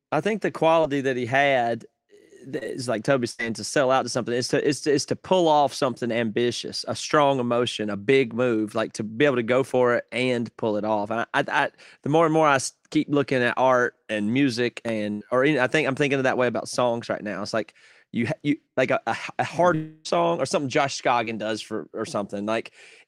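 Brief smears or wobbles of a few hundredths of a second are heard at 0.81, 2.59, 11.01 and 21.25 s. Each is short concealed packet loss: about 20 ms of audio never arrived in time, and the receiver bridged the hole by extending the preceding sound before blending back.

At 3.31 to 3.41 s the sound stretches into a held buzz or fading hiss lasting about 75 ms. Then it jumps ahead, with roughly 80 ms skipped. This is a burst of packet loss. Several consecutive packets went missing and the concealment carried the last sound forward while turning it down. The same happens at 15.11 to 15.23 s, where about 100 ms is lost and covered entirely by concealment, with no silent stretch.

From 19.75 to 20.07 s a continued buzz or hiss, fading over about 0.3 s, fills the gap without dropping to silence. The audio then resumes further on with roughly 300 ms absent. This is likely a long network dropout, where no audio arrived for that stretch and the receiver kept extrapolating the last sound until the stream returned.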